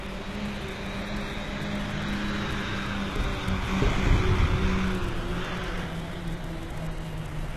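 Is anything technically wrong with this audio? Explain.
Yes. Throughout the clip the treble sounds gritty and metallic, with a glassy sheen that doesn't sit naturally with the body of the sound, and nothing at all comes through above about 12.3 kHz. This is likely HE-AAC compression at a very low bitrate, around 16 kbps. Only the lower spectrum is truly coded. The highs are rebuilt by copying lower bands upward under a coarse envelope, so harmonics misalign across the crossover.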